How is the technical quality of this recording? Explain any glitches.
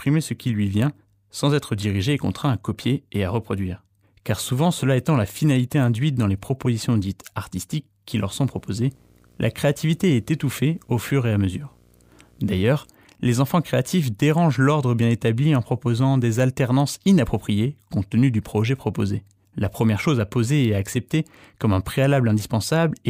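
The recording has one clear fault, a stretch of video or display buzz in the speech. From 8.23 to 12.91 s, between "propositions dites artistiques qui" and "les enfants créatifs dérangent", a screen or video cable couples into the audio. It gives a low buzz at the 59.94 Hz field rate with hash above it and a faint whine at 15.7 kHz, sitting roughly 35 dB under the speech. A spectrogram shows a 59.94 Hz harmonic comb and a thin line at 15.7 kHz.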